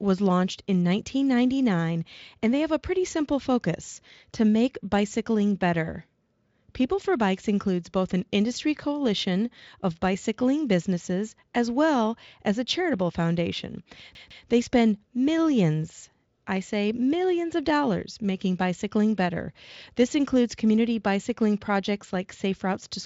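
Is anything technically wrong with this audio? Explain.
Yes, there's one glitch. From 14.15 to 14.46 s the speech hits a CD stuck on one turn: a scratch keeps throwing the laser back a track, so the same 155 ms slice repeats twice, each jump with a tiny mute, giving that quick, even skipping-disc stutter. The Speex coding cuts the top end off near 7.6 kHz, with faint artefacts at most.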